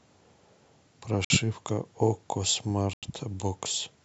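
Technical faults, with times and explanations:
1.25–1.30 s and 2.93–3.03 s: block of digital silence. The speech cuts abruptly to silence for 55 ms, then 93 ms. The second gap fits an unfilled 4096-sample buffer. The waveform goes flat, and the spectrogram shows blank strips edged by thin broadband lines.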